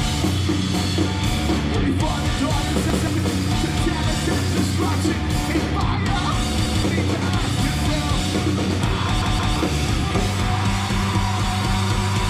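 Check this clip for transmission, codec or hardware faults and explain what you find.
The clip has one kind of fault, a repeated buffer, occurring three times. At 2.90 to 3.07 s and 6.66 to 6.83 s a block of about 171 ms plays a second time, and at 9.22 to 9.56 s it plays twice more. Each repeat fits an 8192-sample buffer being replayed because fresh audio arrived late. Each is heard as a short stutter with a hard join, and the late audio is skipped, losing roughly 150 ms at each of the first two, then 300 ms at the third.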